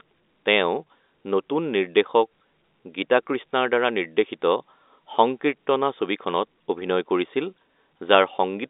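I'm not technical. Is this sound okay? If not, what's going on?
Yes, nothing stood out as a problem on listening; the speech has the narrower, phone-line quality you'd expect from an ordinary landline call.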